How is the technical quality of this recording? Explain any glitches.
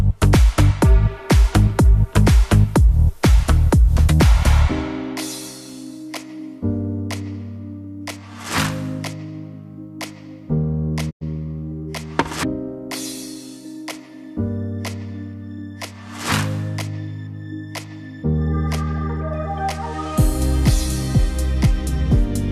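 One glitch stands out: a digital broadcast dropout at 11.09 s, lasting until 11.23 s. The receiver stopped getting usable data, either from lost signal or frames failing their error check, and muted its output rather than play corrupted material. The sound fades out over about 20 ms into roughly 96 ms of silence, which fits a handful of frames, around four, being discarded. The audio then resumes, but whatever was sent during that gap is gone.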